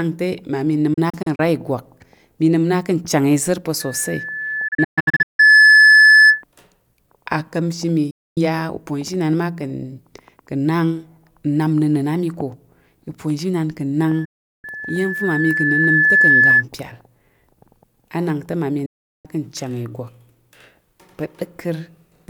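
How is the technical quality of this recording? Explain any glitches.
The recording has two recurring faults: digital broadcast dropouts and loudspeaker feedback squeal, which overlap twice.

Digital broadcast dropouts occur at 0.94–1.40 s, 4.68–5.40 s, 8.10–8.38 s (after "aka̱mshi mi"), 14.25–14.65 s and 18.86–19.26 s (after "anak te mmami"). The first two are scattered holes: 128 ms is lost across 448 ms with runs no longer than 32 ms, then 480 ms across 704 ms with a longest run of 160 ms. The later three are solid gaps of 256 to 384 ms. The receiver muted whenever frames failed, fading out over about 8 ms. The hole lengths come in multiples of 32 ms, which fits 32 ms frames. Each gap is clean silence, not garbled or smeared sound, so the cause is a muting receiver rather than codec concealment.

Loudspeaker feedback squeal runs from 3.80 to 6.43 s and from 14.04 to 16.64 s (after "uponzhinan ka̱"). 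A microphone picked up its own loudspeaker, and the loop gain exceeded one at 1.7 kHz. The result is a single tone that swells over about two seconds to roughly 10 dB above the speech. A steady interference tone would hold a fixed level, but this one grows by itself.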